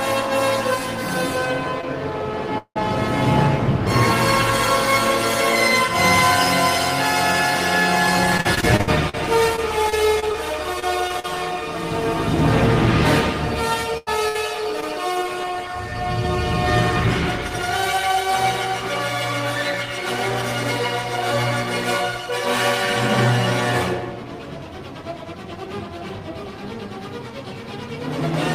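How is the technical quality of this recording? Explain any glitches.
The recording has a run of packet-loss glitches, the kind you get from audio sent over an unreliable network connection.

First, at 1.81 s and again at 14.80 s, there's short concealed packet loss. About 20 ms of audio didn't reach the decoder in time, and it patched the hole by extending the sound just before it for about 14 ms, then eased back into the real signal. The timing shifts only a touch. To the ear it's a tiny smear or wobble.

Next, from 2.58 to 2.77 s there's what sounds like a long network dropout. Roughly 180 ms is gone. The sound before the gap gets stretched into a fading buzz or hiss, and about 80 ms of that stretch is plain silence before the audio picks up again further along. It's most likely a stall in the connection: nothing arrived for a while, and the missing part was never played.

Then, between 8.37 and 11.25 s, you get repeated packet loss with the robotic sound that comes with it. 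There are 14 separate gaps in that stretch, adding up to about 380 ms lost, the longest 61 ms. Concealment covers about 13% of the span. Because each patch barely finishes before the next hole arrives, the sound turns choppy, with little pieces dropping out.

Finally, there are two bursts of packet loss close together, at 13.97 to 14.09 s and 14.29 to 14.36 s. The first loses about 80 ms and the second about 60 ms. Each time the decoder holds the last sound and fades it out, so you hear a brief sustained buzz or a dying hiss. The audio then resumes a little further on, with the in-between portion simply missing.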